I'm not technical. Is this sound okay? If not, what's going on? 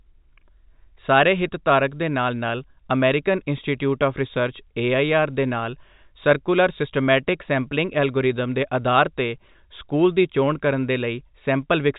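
Yes, nothing is wrong with this speech recording. It has the familiar narrow sound of G.711 telephone coding, the standard format for landline calls, which carries nothing above about 3.8 kHz, so the highest, crispest parts of the sound are missing.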